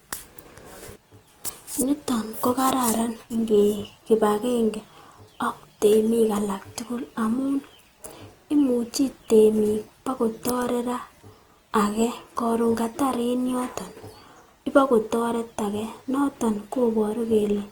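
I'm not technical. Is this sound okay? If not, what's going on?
No. From start to finish the speech has a grainy, rough, noisy texture, likely from Opus compression squeezing it hard. Unlike MP3-style damage, there's less watery swirling, and the sound isn't muffled: the highs stay present, just coarse and gritty.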